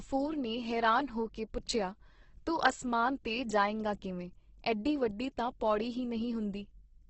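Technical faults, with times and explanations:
Throughout: Opus compression. The speech is grainy and rough with nothing above 8.2 kHz, likely Opus starved of bits, filling bands with noise at roughly 12 kbps.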